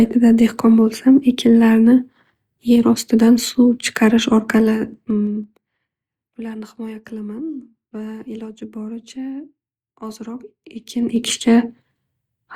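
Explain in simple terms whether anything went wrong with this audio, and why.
Zipper noise appears from 4.52 to 5.93 s, right after "ostidan suv chiqarish", and again from 10.72 to 11.30 s. Each time the volume is moved in a series of small jumps rather than a smooth slide: downward in the first spot, at roughly seven jumps a second, and back up in the second, at roughly fifteen a second. Every jump leaves a tiny click, so the speech picks up a ticking, zipping sound while the volume is changing.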